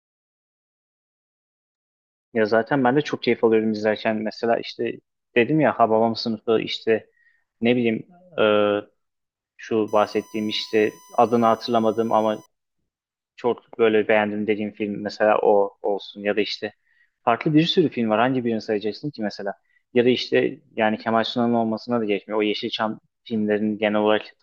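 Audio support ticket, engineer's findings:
USB whine, 9.88–12.46 s: steady fixed-pitch tone at 1 kHz, strongest there, about 30 dB below the speech. Points to USB audio interface power/ground path; bus current pulled in 1 ms frames couples into the analogue stage as a constant whine.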